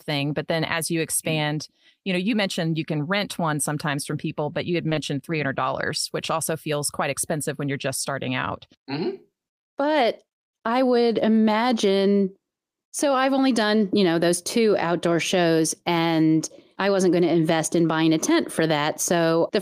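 Just after "you had", the sound hangs for an instant from 4.89 to 4.93 s. This is a short stall from a late packet: the jitter buffer ran dry, so the receiver stretched about 20 ms of the last sound and then resumed with nothing lost, 20 ms later than before.

From 4.93 to 4.97 s comes a brief smear. This is short concealed packet loss: 20 ms never arrived, so the receiver extended the preceding sound to fill the gap before blending back.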